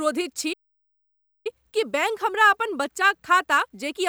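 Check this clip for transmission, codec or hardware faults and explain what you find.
One fault turns up in this speech clip: a playback stall.

From 0.53 s to 1.47 s the speech cuts out mid-flow and leaves a dead silence of about 0.92 s, then picks up again. A gap this long and this clean is a playback stall. The likely cause is the player running dry of buffered data, or its output thread being held up, so nothing reaches the output until it recovers.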